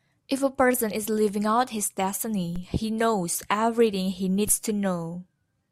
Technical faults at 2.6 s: DC step

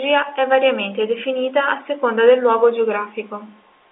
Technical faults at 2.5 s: none

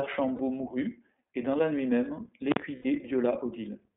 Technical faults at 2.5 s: iLBC codec; invalid numbers at full scale

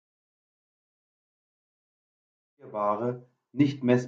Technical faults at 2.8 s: none

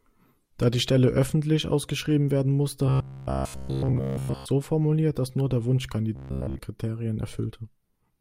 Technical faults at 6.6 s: robotic sound from repeated short buffers

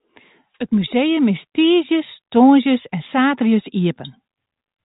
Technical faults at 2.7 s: none

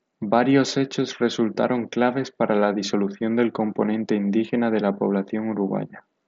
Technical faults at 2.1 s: none

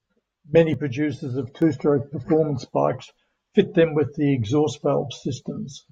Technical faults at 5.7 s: none

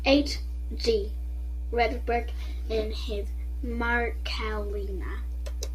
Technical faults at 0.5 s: mains hum

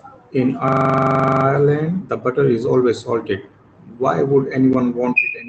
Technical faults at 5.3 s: none

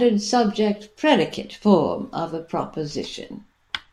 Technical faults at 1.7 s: none

